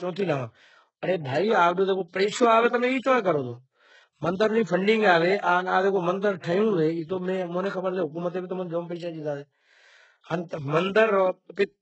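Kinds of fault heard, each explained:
HE-AAC compression: The speech has a gritty, synthetic treble with nothing above 8 kHz, and s sounds come out metallic or lispy. The likely cause is HE-AAC rebuilding the top band from copied lower bands, and the heavy damage fits roughly 8 kbps.
Pre-echo: From 6.40 to 6.43 s, a short hiss lasting about 38 ms comes just before a sharp attack, which sounds softened and smeared. The codec spread its quantisation noise across the whole block, so noise sized for the loud onset filled the quiet moment before it.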